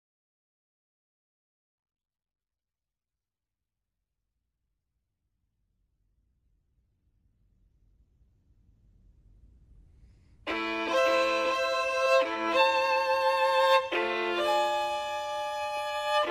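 From 11.04 to 12.06 s the sound is doubled: a second, full-band copy runs about half a second behind the first and a little quieter. That points to a doubled audio track, most likely the same signal captured again through a slower path. Unlike an echo or reverb, the copy has no decay tail or room colouring, never repeats a second time, and cuts in and out abruptly instead of fading.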